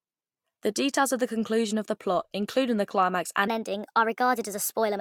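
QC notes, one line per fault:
3.48 to 5.01 s, section at the wrong speed: just after "including the climax and", the speech suddenly turns higher and hurried, running 1.19 times too fast and about three semitones sharp to the end, likely from that stretch being played against the wrong clock.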